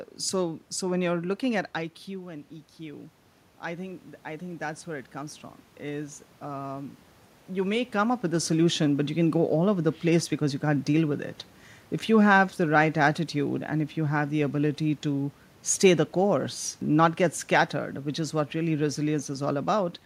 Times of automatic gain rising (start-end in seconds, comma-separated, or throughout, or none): 3.63-7.01